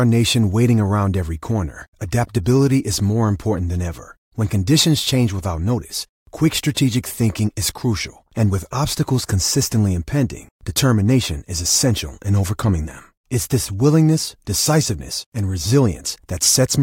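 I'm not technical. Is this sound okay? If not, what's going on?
Yes, this one's fine: nothing in the recording jumps out as a problem, so there's nothing to worry about here.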